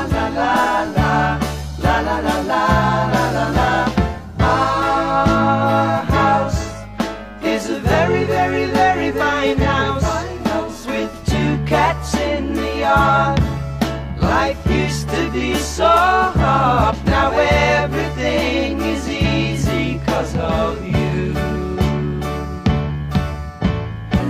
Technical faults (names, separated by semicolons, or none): damaged data in a compressed stream